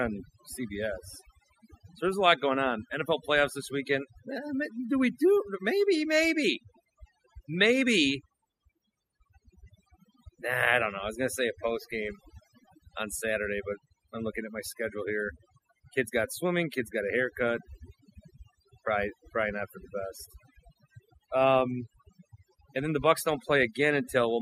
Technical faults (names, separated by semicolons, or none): overdone noise removal